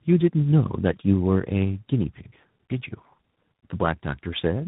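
Throughout, the speech sounds rough, muffled and warbly, with nothing above about 3.8 kHz. This is tandem speech coding: two speech codecs in a row, pointing to a low-rate coder followed by ADPCM, the second re-coding the first's already degraded output.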